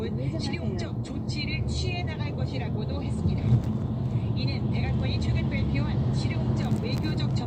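No technical faults can be heard anywhere in this audio.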